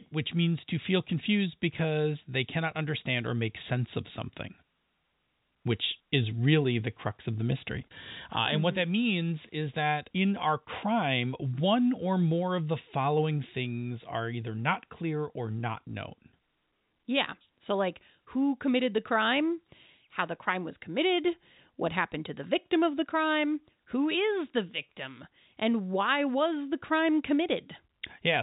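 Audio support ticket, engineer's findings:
Nothing stood out on listening to the speech, which comes through as G.711 telephone-band audio.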